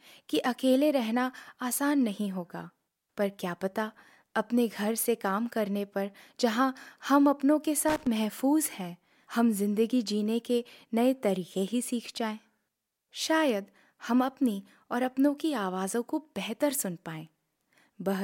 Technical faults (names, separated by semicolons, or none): loose connector crackle